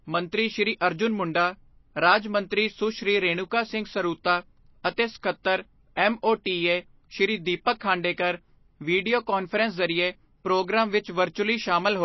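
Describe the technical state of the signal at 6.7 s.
At 6.7 s the speech carries MP3 compression artefacts throughout, likely from a low-bitrate encode: a hard spectrogram ceiling near 5.8 kHz, flickering sparse lines, and watery, swirly sibilance.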